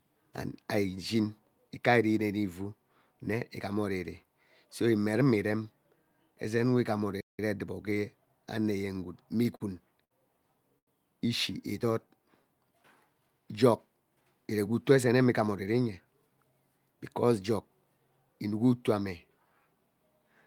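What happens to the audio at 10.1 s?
A short stall from a late packet occurs between 10.04 and 10.12 s. A packet missed its playout deadline, the jitter buffer ran dry, and the receiver filled the gap by stretching the last sound for about 64 ms until the packet turned up. Playback then resumed from exactly where it left off, so nothing is lost. The speech is just held a touch too long, with a faint buzzy or dipping quality, and everything after runs 64 ms later.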